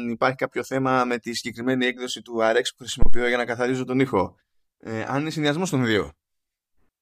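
At 3.02 s a supply, most plausibly phantom power, was switched on or off on a live input, and the sudden DC step travelled through the coupling capacitors into the signal path. The result is a phantom power thump: a deep, low-frequency thud lasting until about 3.24 s and peaking at about −5 dBFS. It dies away quickly, with a decay of roughly 49 ms.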